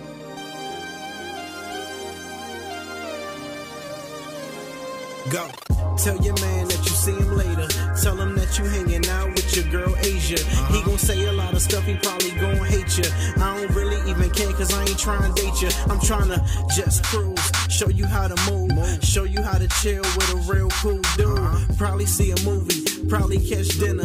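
No technical faults can be heard anywhere in this audio.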